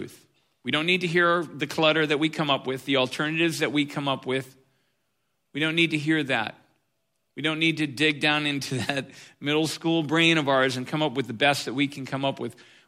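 Nothing technically wrong turns up anywhere in this speech recording, so there are no problem spots or causes to point to.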